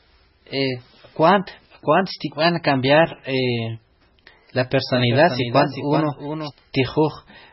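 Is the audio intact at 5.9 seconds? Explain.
No. At 5.9 seconds you're right in the middle of a doubled audio track, running from about 4.93 to 6.51 s. A second full-band copy of the speech trails the original by around 400 ms and sits roughly 10 dB lower. It has no reverb tail or room colour, so it's a dry, quieter echo of every syllable. It most likely comes from a second, slower capture path or an edit that left two copies out of step. The copy cuts in and out abruptly at both ends.

On top of that, the whole clip, including this moment, has heavy MP3 compression damage. Nothing survives above 5.6 kHz, so the speech sounds dull and boxed-in, and the weaker detail has that watery, swirly quality as frequency components flicker on and off between frames. The damage is severe enough that it likely points to a very low bitrate, something around 16 kbps, where the encoder runs out of bits and throws away whole bands.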